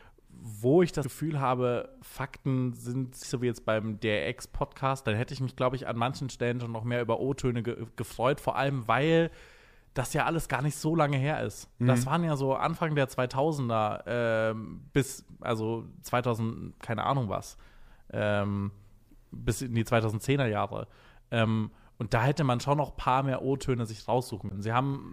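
Damaged data in the compressed stream causes brief glitches at 1.01–1.05 s after "wo ich", at 3.20–3.25 s before "so wie jetzt beim", and at 24.47–24.52 s. Corrupt frames break decoder sync until it finds the next frame header.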